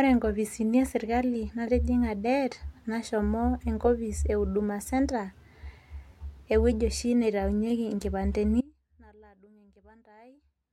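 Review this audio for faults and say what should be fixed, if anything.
At 8.61 s the speech cuts out abruptly and never returns before the end. This is an audio dropout to a faint residue. It is a hard break, not a pause or a fade. Only a faint leak of the signal remains, roughly 30 dB below normal level. The path after the break stayed live. The likely cause is a lost feed, with only leakage still reaching the recording. To prevent this, secure all connections and monitor the input throughout capture.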